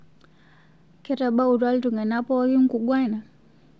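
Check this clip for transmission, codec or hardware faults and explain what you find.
Nothing here points to a transmission, codec or hardware problem; the speech simply carries the sound of a normal call link, with nothing above about 8 kHz, which fits a G.722 wideband connection doing its ordinary job.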